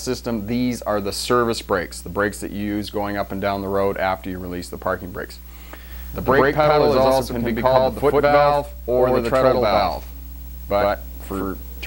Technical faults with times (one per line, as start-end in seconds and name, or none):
5.91-11.87 doubled audio track